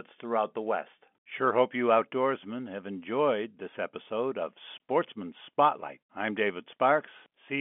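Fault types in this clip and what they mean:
Packet loss filled with silence: at 4.78 s, just after "enjoyed this episode of", the speech drops into a brief hard-edged gap. A single 20 ms packet likely went missing on this narrowband telephone line, and the receiver played silence in its place.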